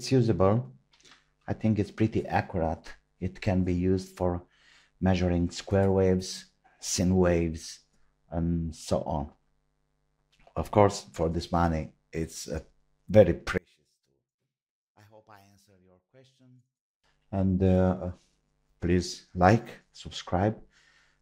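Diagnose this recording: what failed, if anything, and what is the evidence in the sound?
One channel inverted, likely from a reversed-polarity analogue wire: from 13.58 to 17.04 s the mono sum cancels, dropping about 36 dB to a faint residue.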